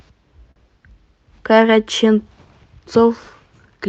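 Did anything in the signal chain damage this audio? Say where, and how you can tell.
Yes, at the network jitter buffer. From 0.51 to 0.58 s one sound is held about 45 ms too long, then the speech resumes from the same place. This is a short stall from a late packet: the buffer ran empty and stretched the last audio until the packet arrived. Unlike packet loss, nothing is skipped, and everything after runs 45 ms later.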